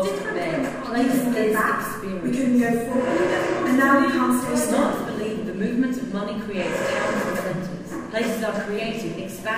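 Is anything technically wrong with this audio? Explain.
No, nothing technically wrong can be heard here.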